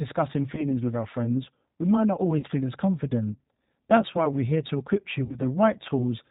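The speech passes through the G.729 codec at 8 kbit/s for the whole clip. The damage is plainly audible. The codec rebuilds each short frame from a vocal tract model, a pitch predictor and a handful of pulses. Nothing above 4 kHz survives, so the speech sounds muffled and narrow. The voice has a rough, slightly synthetic edge.

VoIP packet loss concealed by the speech codec comes next, three times. From 0.55 to 0.69 s, about 20 ms of audio goes missing, which fits one lost packet. From 2.39 to 2.46 s and from 5.25 to 5.39 s, about 40 ms goes missing each time, which points to two packets. The decoder fills each gap by repeating its last pitch and filter at falling gain. This gives a brief stretched sound, a buzzy tone or a coloured noise that fades. The speech stays weak or distorted for a moment after the packets return, because each frame builds on the one before.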